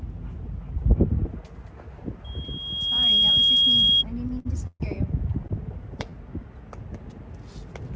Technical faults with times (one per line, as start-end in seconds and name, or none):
2.24-4.04 loudspeaker feedback squeal
4.39-4.47 short stall from a late packet
4.67-4.82 call audio freeze